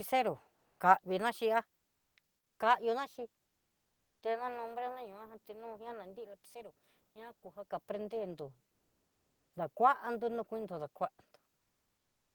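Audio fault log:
0.55–0.79 s and 8.67–9.53 s, comfort noise in place of the background: in pauses where the background sits about 50 dB below the loudest sound, the real ambience gives way to steady, featureless noise. Its level shifts by about 7 dB before "ka'a vina xhiá" and by about 1 dB in the longer second gap. This is likely Opus discontinuous transmission, with the receiver synthesising noise while the sender is silent.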